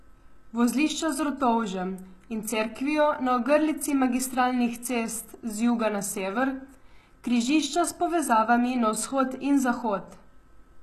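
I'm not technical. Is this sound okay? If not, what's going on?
No. HE-AAC compression damage runs through the whole clip, most likely from heavy squeezing with the HE-AAC codec. It keeps only the lower sounds and fakes the treble by copying lower bands upward, so s sounds come out gritty or lispy, and nothing survives above 12.3 kHz.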